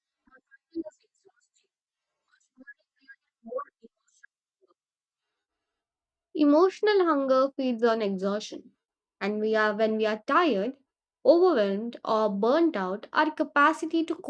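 No technical faults are audible.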